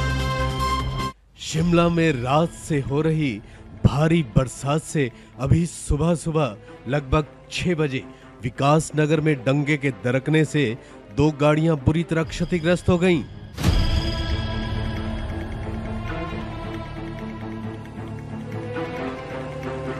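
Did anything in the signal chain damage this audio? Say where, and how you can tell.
No, nothing in the signal chain damaged this audio.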